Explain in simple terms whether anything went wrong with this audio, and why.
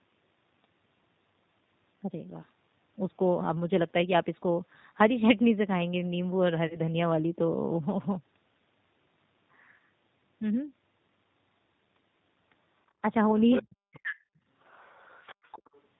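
Yes, several things went wrong.

Throughout, the speech passed through the G.729 codec, a phone-call codec that rebuilds the voice from a simple model. The damage is plainly audible. Everything above 4 kHz is gone, and the voice sounds rough and synthetic rather than natural.

From 6.67 to 6.80 s there is VoIP packet loss concealed by the speech codec. About 30 ms of audio never arrived. The decoder filled the gap by stretching the last sound it had while fading it. It takes a moment to recover afterwards.

From 13.61 to 14.34 s, the voice sinks far down for roughly 0.7 s in total. This is likely speech suppressed in double talk. The call's echo canceller could not tell the talker apart from the loudspeaker, so it turned both down.

From 14.63 to 15.81 s, a second, much quieter voice can be heard underneath. This is likely the other side's voice leaking through. The echo canceller did not fully remove the far side's voice, which was playing on the loudspeaker and picked up by the microphone.

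The call's microphone processing removed the lowest bass. That is normal and not a fault.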